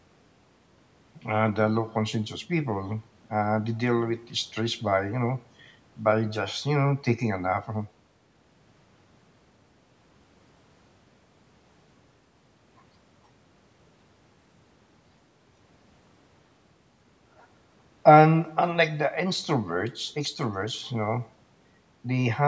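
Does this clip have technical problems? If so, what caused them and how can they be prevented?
No, there are no technical problems in this speech clip. It has passed through a call's microphone processing, which has removed the lowest bass and leaves nothing above 8 kHz, as is normal for that path.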